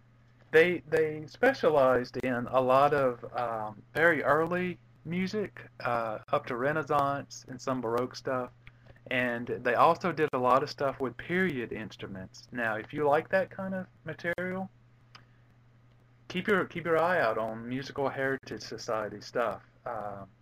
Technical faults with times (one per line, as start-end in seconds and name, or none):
2.20-2.23 gap at a join of encoded pieces
6.23-6.28 gap at a join of encoded pieces
10.28-10.33 gap at a join of encoded pieces
14.33-14.38 gap at a join of encoded pieces
18.38-18.43 gap at a join of encoded pieces